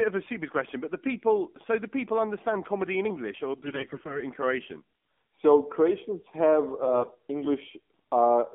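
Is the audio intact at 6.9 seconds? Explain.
No. From 6.82 to 7.13 s, AMR bit errors corrupt the speech. Unprotected bits in each frame arrive flipped, at a rate of around 5 percent. Excitation pulses land wrongly and fine gain and spectral values drift. Pitch and level roughly hold, but the voice turns hoarse, scratchy and gargly.

Underneath, the AMR narrowband mobile codec runs throughout. Its plainly audible buzzy, synthetic quality fits a low mode near 7.4 kbps. The line band runs only from 200 Hz to 3.5 kHz, so the sound is thin and muffled at 6.9 s too.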